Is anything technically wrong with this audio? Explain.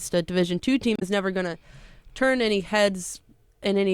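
Yes. From 0.96 to 1.03 s, damaged data in a compressed stream breaks into the speech. Corrupted bytes make the decoder misread those frames and lose sync until it finds the next valid header. This produces a 70 ms glitch, seen as a sharp-edged disturbance on a spectrogram and as abrupt discontinuities in the waveform.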